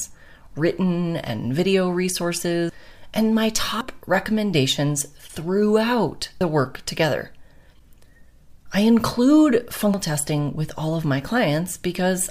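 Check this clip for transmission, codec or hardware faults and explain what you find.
There are three discontinuities where the audio jumps forward without any gap, at 3.81 s, 6.41 s and 9.94 s. These sound like a dropped buffer (overrun). Each is an abrupt jump in the sound. The likely cause is that the capture software fell behind, so the hardware overwrote unread samples and the surviving ends were spliced together. Roughly a tenth of a second vanishes at the first two points and about 0.2 s at the third. A waveform shows a sudden step in shape, and a spectrogram shows a thin vertical broadband line where the content changes abruptly.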